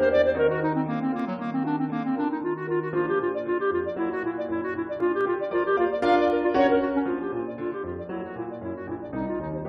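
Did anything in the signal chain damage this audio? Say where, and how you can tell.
Yes. Single sharp clicks at 1.20 s, 5.21 s and 6.30 s are consistent with dropped samples, most likely at the driver or buffer stage. A fraction of a millisecond goes missing each time, so the waveform steps abruptly and the spectrogram shows a thin vertical line.

At 5.00 to 5.02 s there is a tiny skip from overlap between stream segments, pointing to the streaming or segmenting stage: about 14 ms of audio is trimmed at a segment boundary. The waveform jumps discontinuously, and a brief vertical smear appears across the spectrogram.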